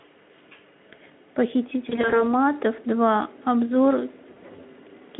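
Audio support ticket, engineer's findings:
VoIP packet loss concealed by the speech codec, 1.89 to 2.34 s: several isolated single-frame drops, each consistent with a 20 ms packet, over about 200 ms. The decoder extrapolated from the last pitch and filter at reduced gain, so the sound turns briefly buzzy or noisy and weak through narrowband Speex at 15 kbps. 4.33 to 4.43 s: one 20 ms packet lost. The concealment smears and thins the audio, and it stays weak or distorted for tens of milliseconds after packets resume while the decoder state recovers.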